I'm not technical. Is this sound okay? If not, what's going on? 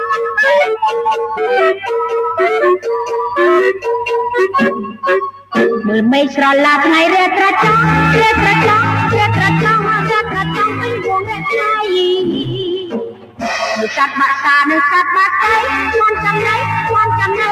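No. A noise suppressor applied to music or sounds was left running. It was designed to clean up speech, so it treats steady tones and lingering echoes as unwanted noise and keeps turning them down. The result is a level that breathes up and down unevenly throughout.

At several moments the suppressor turned sound down further: 0.0 to 0.37 s, 5.31 to 5.55 s, 10.23 to 10.38 s, 10.68 to 11.47 s, and 12.43 to 13.45 s. The cuts at 5.31 s and 12.43 s are the deepest, where held or fading sound sinks noticeably.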